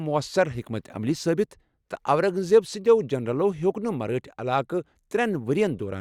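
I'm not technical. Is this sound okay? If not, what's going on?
Yes, the recording is technically sound, with nothing in the signal that points to a recording or playback problem.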